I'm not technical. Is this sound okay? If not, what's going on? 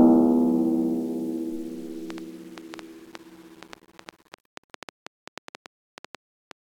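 No. From 2.10 s to 6.52 s there is a train of clicks: around thirty sharp ticks of similar shape, about 5.4 per second at an uneven pace, sitting on top of the music. The likely cause is electrical interference or a faulty connection or power supply.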